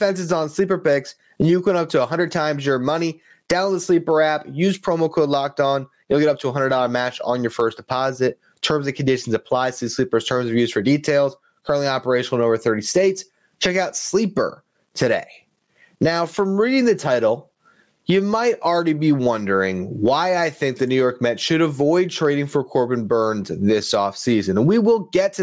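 A speech recording with gain pumping running the whole way through. The level gets yanked back down the moment a loud syllable arrives, a swing of something like 20 dB, so the level keeps breathing in and out and the dynamics feel squashed flat. The likely cause is the input gain set far too hot, with a fast limiter or compressor clamping down on every peak. The call-style microphone processing, with nothing above 8 kHz, isn't part of the problem.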